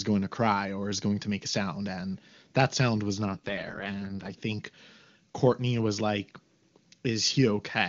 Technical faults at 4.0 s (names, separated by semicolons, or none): AMR rate drop